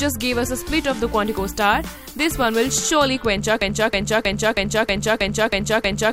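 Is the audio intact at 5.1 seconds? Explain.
No. At 5.1 s the audio is inside a broken-record loop that begins at 3.62 s and runs to the end of the clip. A fragment of about 318 ms repeats exactly, back to back, eight times, so the sound stutters in a fixed cycle instead of moving forward. The likely cause is a stalled player, encoder or stream that kept resending its last buffered fragment. The audio that should have played from 3.62 s onward is lost.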